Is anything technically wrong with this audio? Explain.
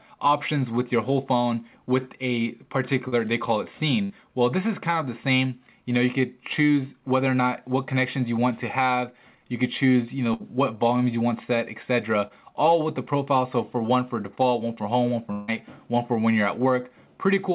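Yes. The audio has gaps from lost network packets, covered over by the receiver's concealment. Five events fall into three kinds.

Short concealed packet loss occurs at 3.08 to 3.14 s and again at 12.28 to 12.32 s. About 40 ms of audio is missing at the first point and about 20 ms at the second. The receiver bridged each hole by extending the last sound and then blending back into the real signal. Each one is heard as a brief smear or wobble, and any very short sound there can disappear.

A burst of packet loss hits at 4.04 to 4.12 s and at 10.34 to 10.42 s. In each, about 60 ms of audio never arrived in time to be played. The receiver kept the last sound going and faded it as the gap ran on. A pitched sound turns into a short held buzz, and anything noisier becomes a fading hiss. The audio then picks up slightly further along, with that slice gone.

A long network dropout runs from 15.32 to 15.50 s, about 160 ms of missing audio. 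The whole stretch is filled by concealment, with no fall to full silence. What is heard is the last sound stretched into a decaying buzz or hiss, then a jump back in further on. The cause is likely a stall in the network path rather than brief packet loss. The filled section sounds like a stretched tail, and the content in between is absent.

All of this sits on a telephone-band call path, G.711 mu-law at 64 kbps, which is why nothing is heard above 4 kHz.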